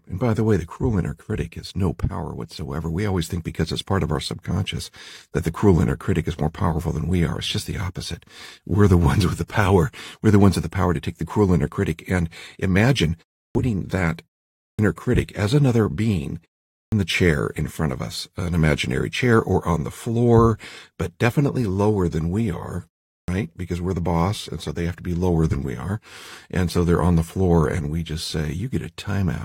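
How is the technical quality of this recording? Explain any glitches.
The recording suffers from a clipped start after a pause, four times: at 13.46 s, at 14.70 s just before "critic as another being", at 16.83 s before "the chair in front", and at 23.20 s after "lower than we are". After pauses of 0.31 to 0.5 s, the output path drops into a low-power state and needs 82 to 93 ms to wake, so each word bursts in without its opening sounds. Unlike muted pauses, which only silence the gaps, actual speech is lost.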